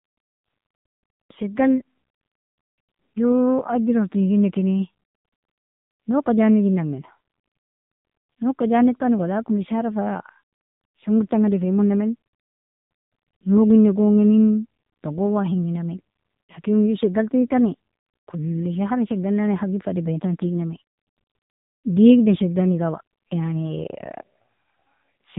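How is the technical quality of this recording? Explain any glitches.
The technical quality is poor throughout, because the speech has passed through an AMR narrowband mobile codec.

For the full clip, nothing is present above 3.8 kHz, and the voice sounds buzzy and synthetic. AMR-NB rebuilds speech from a vocal-tract model excited by a few pulses per 5 ms subframe. The heavy damage fits a low mode near 6.7 kbps.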